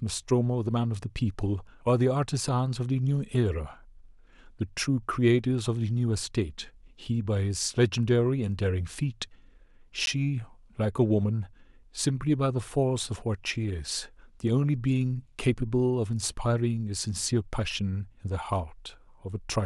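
A Bluetooth stall at about 10.06 s cuts the speech to silence for 13 ms before it carries on. The likely cause is radio interference delaying packets, so the headphones' buffer ran empty and playback paused until the resent data arrived.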